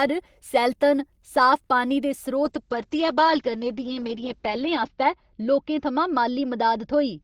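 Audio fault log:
2.44–7.23 s, call bitrate drop: Right after "सैलतन साफ पानी दे", the encoder's rate falls from 32 kbps to 8 kbps and stays at the lowest rate for 2.2 s. With so few bits, the speech is coded more coarsely, giving a rough, watery texture. The audio bandwidth narrows from 20 kHz to 8 kHz, removing the upper range, so the speech sounds muffled and dull. The drop continues until the end of the clip.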